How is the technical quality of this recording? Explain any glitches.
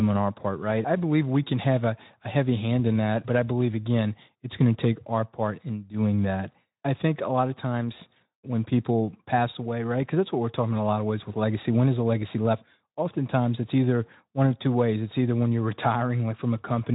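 No glitches are audible anywhere in this speech recording.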